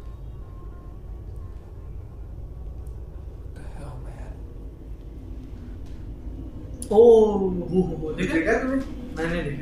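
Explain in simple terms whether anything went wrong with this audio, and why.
Nothing went wrong with the signal here: the audio arrives intact, with no interruptions, damage or distortion anywhere in the recording.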